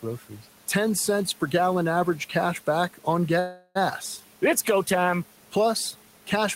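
At 3.39 s the speech stalls in a call audio freeze lasting until 3.77 s. The last sound is carried on as a fading buzz for about 360 ms, then drops to near silence for the final 20 ms before the talker resumes exactly where they left off. Nothing is lost. The pause is inserted, pushing everything after it about 360 ms later. The likely cause is delayed packets draining the receiver's jitter buffer. Room noise sits about 20 dB below the speech.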